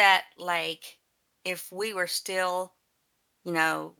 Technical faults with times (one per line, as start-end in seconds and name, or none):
none